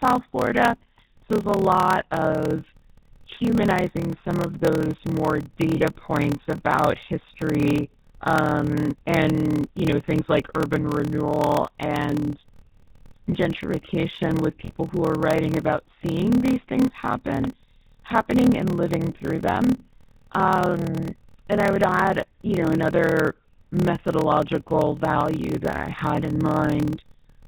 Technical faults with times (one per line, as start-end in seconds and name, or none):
0.00-27.48 GSM full-rate codec
0.00-27.48 block size mismatch (padded)
5.76-5.82 lost GSM frames
14.65-14.73 lost GSM frames
19.66-19.80 lost GSM frames